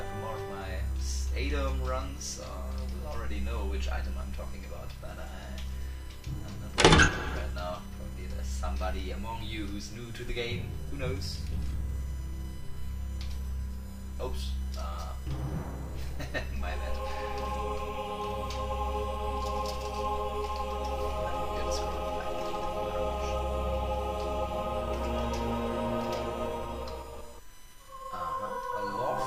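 A steady USB whine at 1 kHz sits about 30 dB below the audio throughout, from 1 ms bus frames leaking through power or ground, drawing a thin horizontal spectrogram line.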